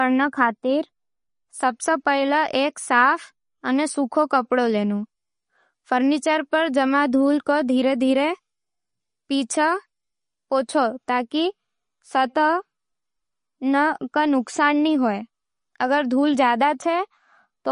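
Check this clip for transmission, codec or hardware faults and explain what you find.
One codec fault runs through the whole speech clip, likely MP3 compression. Nothing sounds above 10.6 kHz, and the damage is plainly audible. Starved of bits, the encoder cut the treble and dropped weak frequency lines that flicker between frames, leaving a watery swirl that fits a bitrate around 40 kbps. A plain low-pass filter would dull the top without that swirl.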